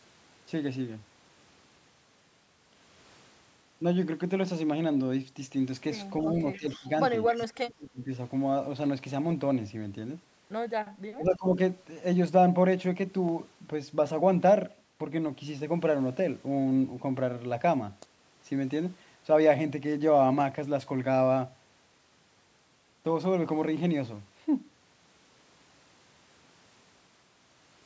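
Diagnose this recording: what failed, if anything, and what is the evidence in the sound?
Call processing, echo leak: a faint delayed copy of the speech appears twice, from 6.53 to 6.78 s and from 7.27 to 7.45 s, trailing the original by 268 ms and sitting roughly 20 to 25 dB below it. The fixed delay and low level point to the far end's loudspeaker feeding its microphone, with the echo canceller likely failing to remove all of that acoustic path before the signal was returned.

Call processing, speech suppressed in double talk: the talker's level dips while the other side is active, from 6.57 to 6.87 s by about 15 dB, from 7.31 to 8.1 s by as much as about 30 dB, and from 11.16 to 11.58 s by about 15 dB. The first two dips coincide with the echo bursts, so the likely cause is the canceller's suppressor failing to separate local speech from loudspeaker echo and attenuating both.

Driver or buffer stage, dropped samples: a single sharp click sounds at 13.29 s, a narrow vertical line across the full band, which tops out at 8 kHz as expected from the call's microphone processing. 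The gap is a fraction of a millisecond, too short to remove audible content. The waveform jumps from one value to a later one, and the likely cause is a few samples being lost in the capture or transfer path.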